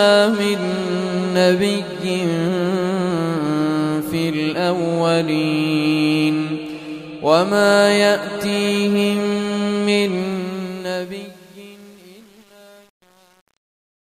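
A fade-out stage that keeps too few bits and adds no dither, consistent with an 8-bit word length, causes truncation distortion on the fade from 10.19 s to the end at 14.16 s. The fade begins around 10 s, and from 10.54 s onward its quiet tail turns gritty.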